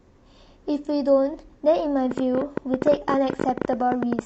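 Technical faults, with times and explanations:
2.11 to 4.20 s, train of clicks: from just past the two-second mark to almost the end of the speech, a rapid ticking sits on top of the sound, around 13.5 clicks per second at an uneven spacing, some thirty in all and standing roughly 15 dB above the signal. Each click has much the same sharp shape and they continue through pauses, which separates them from lip or mouth noise. The likely cause is electrical interference or a faulty connection or power supply injecting repeated pulses.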